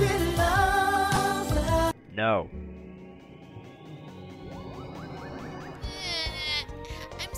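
At 1.15 to 1.17 s, lost LE Audio frames, about 15 ms (likely two frames), are concealed by the LC3 decoder reusing the last spectrum with random signs, giving a brief noisy smear, visible as a short diffuse band-wide patch on a spectrogram. The lossy compression damage is light.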